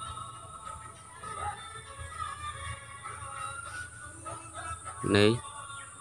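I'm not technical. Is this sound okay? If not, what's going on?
Yes, nothing here points to a technical fault, and no fix is needed.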